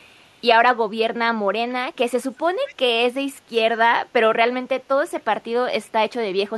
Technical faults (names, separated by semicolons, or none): echo leak